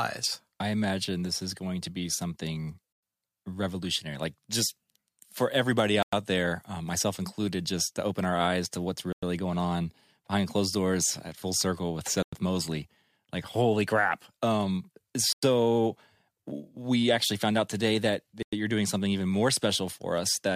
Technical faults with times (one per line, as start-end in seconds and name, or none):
2.93-3.03 gap between chunks
6.03-6.13 gap between chunks
9.13-9.23 gap between chunks
12.23-12.33 gap between chunks
15.33-15.43 gap between chunks
18.43-18.53 gap between chunks